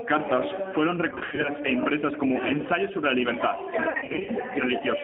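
The whole clip runs through the G.729 codec at 8 kbit/s, so the speech sits in a narrow 200 Hz to 3.6 kHz line band and has that rough, slightly synthetic edge from being rebuilt out of a filter, a pitch predictor and a few pulses per frame. The damage is plainly audible.

Between 1.10 and 1.51 s, just before "e impresas", there's VoIP packet loss concealed by the speech codec. About 190 ms goes missing in bits across 340 ms, in runs up to 70 ms. The decoder stretches its last sound into a fading buzzy tone or coloured noise. It happens again from 3.90 to 4.31 s, with 240 ms lost across 380 ms and the longest gap 50 ms.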